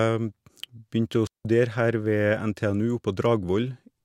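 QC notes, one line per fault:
1.27 to 1.45 s, digital wireless dropout: the speech simply stops for about 180 ms and comes back, a clean hole of near silence with no crackle, hiss or burst of noise on either side. That's the receiver giving up on a stretch of corrupted data and muting itself with a very quick fade rather than passing garbage through, so instead of noise you just get a tidy gap where the audio should be.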